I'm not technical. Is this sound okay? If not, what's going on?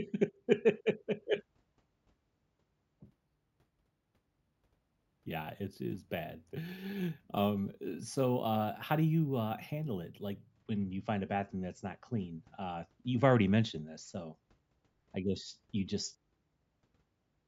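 No. From about 3.06 to 10.50 s, just before "when you find a", the speech picks up a bright, metallic fizz riding on top of it. That's imaging from sample-and-hold upsampling: the audio was converted to a higher sample rate by simply repeating each sample, with no smoothing. That leaves a mirrored, ghost copy of the sound up high, roughly 8 to 16 kHz, which you hear as that fizz. It gets louder and quieter along with the speech.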